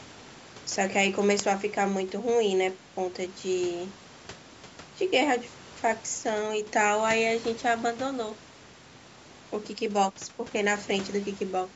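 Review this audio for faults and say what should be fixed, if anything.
Nothing stood out on listening to this speech, so there is nothing to fix.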